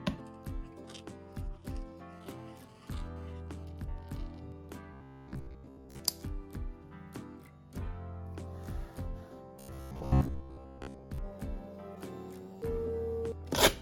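From 2.13 to 3.65 s there's GSM phone buzz: a hard, raspy 217 Hz tone packed with harmonics, sitting about 26 dB under the signal. It's a nearby 2G phone moving data, its radio bursts rectified by the audio circuitry, so it comes and goes.

Then from 4.93 to 6.0 s and again from 9.57 to 11.18 s the audio turns robotic, a rigid metallic buzz at 66.8 Hz. That's likely repeated short buffers: roughly 15 ms chunks looped while most of the real audio gets skipped.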